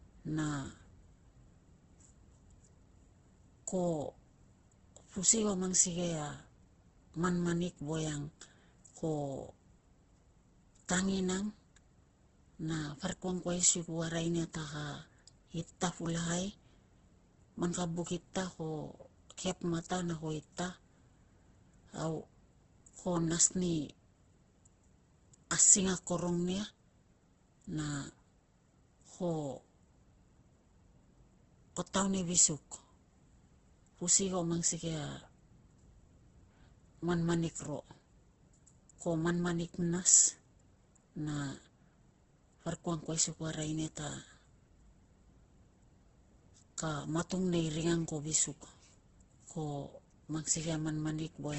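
From start to finish the speech carries Opus compression, likely at a very low bitrate around 12 kbps: tones sound rough, grainy and noise-filled rather than swirly, and nothing survives above 8.1 kHz. A spectrogram shows a hard ceiling there and smeared, noisy band textures below.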